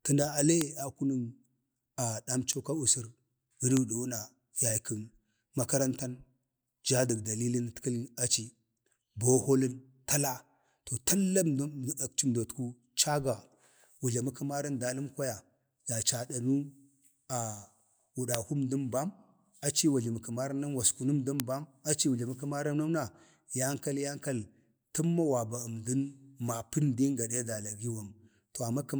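Bit error spikes at 0.61, 2.53, 3.77, 18.35 and 21.40 s break into this speech as isolated sharp ticks. Each is only a sample or a few long and peaks at about -7, -20, -13, -7 and -1 dBFS. A single flipped bit sends the sample value jumping by a power of two before it snaps back, producing a broadband click unrelated to the speech.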